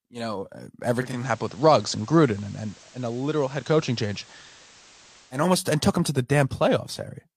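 Right after "you know uh", at about 0.96 s, the receiver drops its digital stream and blends over to the FM broadcast of the same station over roughly 0.29 s, staying there until about 5.46 s, just before "and took him to". It's classic digital radio blending to analogue: there's a hiss floor sitting around 25 dB under the speech. The level holds steady across both blends.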